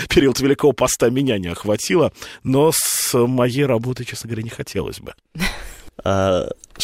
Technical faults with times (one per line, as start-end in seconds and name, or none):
1.04-1.76 GSM signalling bursts